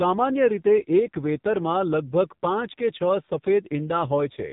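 From start to finish, the speech carries the sound of the AMR narrowband mobile codec, heavily degraded. Nothing above about 3.8 kHz remains, so sibilants and breath detail are gone and the voice sounds boxed-in and telephone-like. The codec rebuilds speech from a vocal-tract model excited by sparse pulses in short frames. At this damage level that gives a buzzy, synthetic edge, which fits one of the lower AMR-NB modes, around 5.9 kbps.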